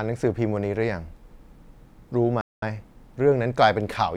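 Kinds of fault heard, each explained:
playback stall: speech halts abruptly mid-flow into flat silence for about 0.21 s at 2.41 s, likely the player starving for data, unlike a natural pause.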